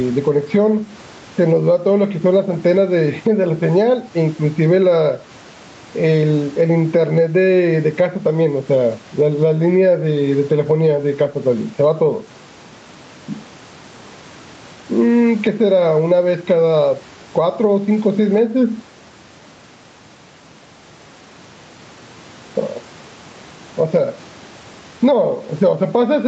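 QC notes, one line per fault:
Throughout, gain pumping: the input gain is likely set far too high for the microphone, so a fast limiter clamps down on every loud syllable of speech and releases in the pauses. The level swings by around 10 dB, and loud and quiet passages are squashed close together within the call's 8 kHz band.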